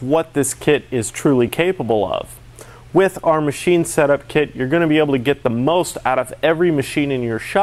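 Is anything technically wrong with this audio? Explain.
Yes. At 1.48 s there are lost LE Audio frames: a 7.5 ms gap, consistent with a single dropped LC3 frame. The decoder concealed it by repeating the previous spectrum with randomised signs, so tonal content turns briefly into a short noisy smear.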